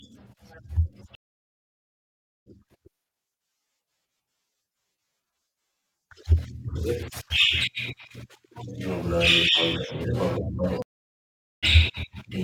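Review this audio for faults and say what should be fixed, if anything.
Stream reconnects at 1.15–2.48 s and 10.82–11.64 s: the connection dropped, leaving 1.3 s and 0.8 s of silence, then a fresh decoder resumed the speech about one second and half a second later. Buffering more audio ahead and reconnecting without discarding the player's position would prevent these gaps and skips.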